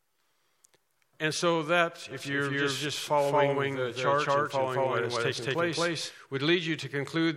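From 2.11 s to 6.11 s a doubled audio track appears, most likely because a second, slower capture path or a misaligned edit adds another copy of the same material. That copy trails the original by roughly a fifth of a second and sits at about the same level, full-band and without decay or room colour, so every event is heard twice in a flat, mechanical echo that cuts in abruptly at 2.11 s and stops just as suddenly at 6.11 s.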